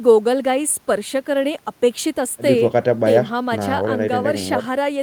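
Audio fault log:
No faults were heard in this speech clip.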